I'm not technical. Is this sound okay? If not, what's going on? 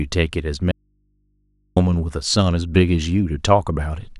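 No. An audio dropout to a faint residue from 0.71 to 1.77 s: the speech cuts out for about a second, leaving only faint hum, likely a brief signal loss.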